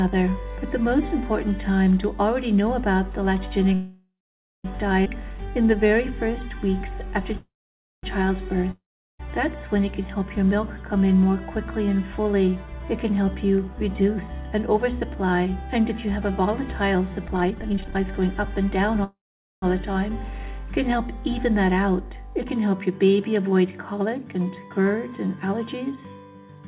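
Audio band-limited to 4 kHz, which points to a narrowband G.711 call path, has several call audio freezes: 3.74–4.66 s, 7.37–8.05 s and 19.04–19.64 s. Each likely comes from packets held up until the jitter buffer ran dry. The last sound continues as a fading buzz and then falls silent for about 0.46–0.53 s. Playback resumes where it stopped, so nothing is lost. On a waveform each freeze shows a decaying tail followed by a flat line, and on a spectrogram smeared, repeating bands fade into a blank column. A skip ahead at 5.04–5.07 s drops roughly half a second of audio. The two sides are spliced almost directly, appearing as an abrupt discontinuity with no gap. A jitter buffer slow-down follows from 5.16 to 7.34 s. Repeated pitch periods add 140 ms, so the audio plays at 94% speed with the same pitch and drawn-out sounds, and the spectrogram shows stretched harmonics. A long network dropout at 8.71–9.21 s loses about 0.48 s. 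A fading buzz gives way to roughly 0.38 s of silence, and the audio returns further on. A jitter buffer speed-up at 12.66–14.29 s runs at 112%, removing roughly 0.2 s. A second at 17.28–18.91 s runs at 143%, removing roughly 0.7 s. Both sound hurried at an unchanged pitch, with events compressed in time.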